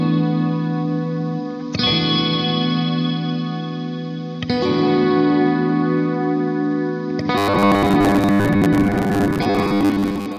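Everyday sounds, with a robotic sound from repeated short buffers from 7.38 s to the end: a rigid 100 Hz metallic buzz, likely from about 10 ms buffers replayed for most of that stretch.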